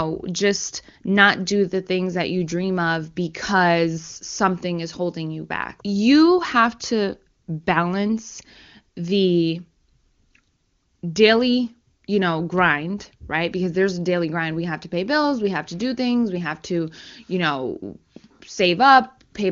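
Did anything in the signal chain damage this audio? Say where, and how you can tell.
No, no stage in the chain damaged this speech.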